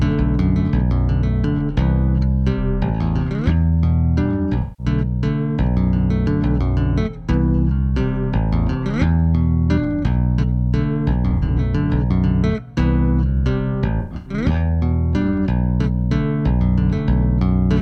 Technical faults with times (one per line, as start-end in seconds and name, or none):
4.61-4.86 AAC frame loss with concealment
11.30-11.60 AAC frame loss with concealment
14.00-14.33 AAC frame loss with concealment